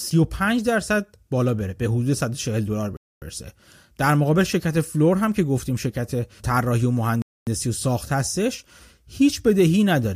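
Speech with a gap between chunks: hard-edged 250 ms silences at 2.97 s and 7.22 s, one per 4-second chunk, and no sound lost, unlike dropouts that delete audio.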